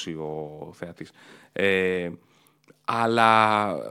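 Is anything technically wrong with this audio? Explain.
No, I can't hear anything technically wrong here.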